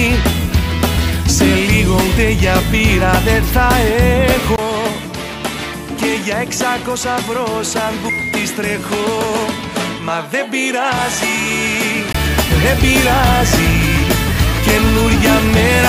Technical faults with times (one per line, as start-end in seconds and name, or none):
4.56-12.14 input switched to a poorer device